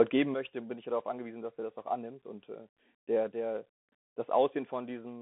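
Throughout the speech, the Bluetooth CVSD headset codec limits the band to 200 Hz to 3.5 kHz, with nothing above 3.8 kHz. Its one-bit up-or-down coding, which fits a 64 kbps stream, plainly adds granular hiss, scratchy s sounds and distortion where the adaptive step lags.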